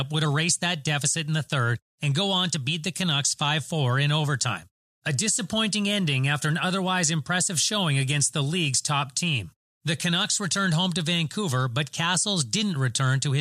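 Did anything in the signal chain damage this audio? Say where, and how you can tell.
No, nothing in the signal chain audibly damaged this speech recording, and the signal reaches the listener intact at every stage.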